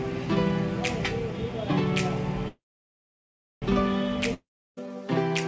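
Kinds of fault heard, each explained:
Call audio freeze: at 2.48 s the sound stalls for about 1.14 s, a brief fading buzz then roughly a second of silence, before carrying on from where it stopped. That's likely packets held up in transit draining the jitter buffer, so the gap is inserted and nothing's actually lost.
Long network dropout: from 4.34 s to 4.87 s the last sound trails off as a fading hiss into about a third of a second of silence, then the audio resumes further along, skipping around 0.44 s. Likely a stretch of packets that simply never arrived, so that part is gone for good.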